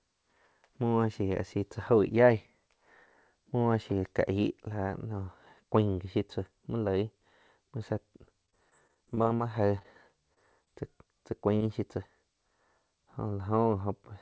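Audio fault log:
8.46–9.41 s, repeated packet loss (robotic sound): just after "muo tzá", nine gaps land in under a second, the longest about 23 ms, roughly 120 ms lost overall. Each hole gets patched by stretching the last sound, so this stretch turns choppy and robotic.
9.79–9.83 s, short stall from a late packet: one packet arrived about 20 ms late and the jitter buffer ran dry. The receiver held the last sound for 20 ms, then picked up right where it left off, so nothing's missing, just a sound held a touch too long.
9.83–9.86 s, 10.34–10.38 s, 10.64–10.68 s, 11.56–11.62 s, short concealed packet loss: about 20 ms of audio goes missing each time, 40 ms in the last one. The receiver bridges each gap by continuing the last sound and blending back in, which you hear as quick smears or wobbles.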